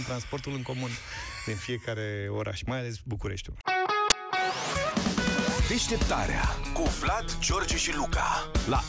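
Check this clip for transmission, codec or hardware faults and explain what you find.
One fault: file tags played as audio, at 4.10 s. A tiny embedded cover picture, stored as compressed data, is being read as samples, giving a hard-edged burst of very loud white noise. Lasting only about 15 ms, it is heard as a loud snap with abrupt edges.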